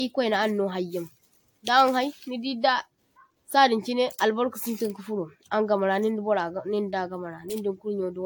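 A swirly, hollow quality runs through the whole of this speech recording: the sound is smeared, consonant attacks are blunted rather than crisp, and the upper range has a watery, phasey texture, with nothing above about 19.3 kHz. That is generation loss, likely from re-encoding with AAC-LC around seven times at a rate that points to 96 kbit/s, each pass quantising on a shifted frame grid so the noise and spectral holes pile up.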